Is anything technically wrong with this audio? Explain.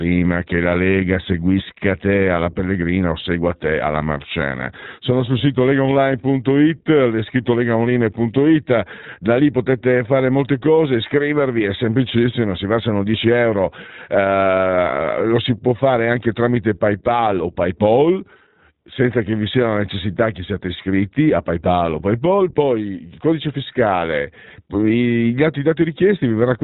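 Yes. The speech has been through the iLBC codec throughout. This narrowband VoIP coder removes everything above 4 kHz and rebuilds each frame's excitation independently, which gives the plainly audible dull, slightly rough, synthetic texture. That fits its 15.2 kbps mode with 20 ms frames.

There are lost iLBC frames from 5.38 to 5.42 s, consistent with a single missing 20 ms frame. The decoder concealed the gap by repeating the last pitch cycle blended with noise, heard as a brief buzzy, held vowel-like sound before clean decoding resumes immediately.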